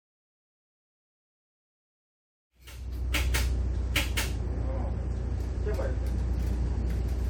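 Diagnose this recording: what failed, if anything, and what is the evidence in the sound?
Nothing in the recording points to a failure at any stage of the chain. The smooth fade-in, rising from silence at about 2.5 s to full level by 3.45 s, arrives gradually with no click or hard edge, as a deliberate edit would.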